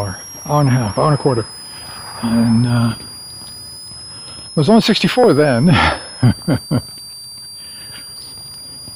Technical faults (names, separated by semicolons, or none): switching supply whistle